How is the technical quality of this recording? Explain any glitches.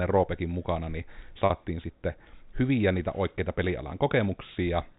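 There's one glitch, sitting on top of telephone-band G.711 coding that tops out at 4 kHz. At 1.46 s there's packet loss with pitch repetition: about 40 ms dropped, likely two 20 ms packets, bridged by repeating the last pitch period, so the speech briefly holds with a slight buzz.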